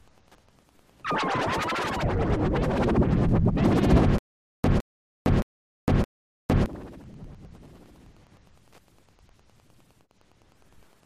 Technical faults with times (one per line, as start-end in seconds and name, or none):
0.00-11.05 Wi-Fi interference
4.18-6.66 stutter with silent gaps